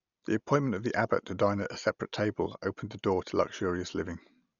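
All the way through, the speech sounds dull and rough, with nothing above 6.9 kHz and fluttering dither noise, likely heavy Dolby Digital compression at a starved bitrate, something like 48 kbps.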